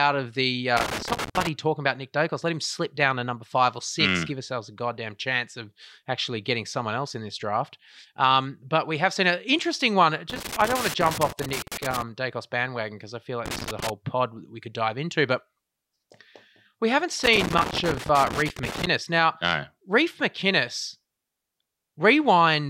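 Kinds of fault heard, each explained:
Loose connector crackle: a worn or dirty contact keeps making and breaking the line, chopping the speech into scratchy bursts. There are four, between 0.77 s, after "of the", and 18.87 s. Unlike steady digital clicks, they come in irregular, uneven clusters.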